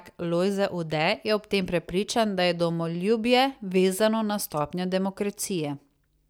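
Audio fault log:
No faults can be heard anywhere in this speech recording. Nothing in it calls for a timed entry in the log.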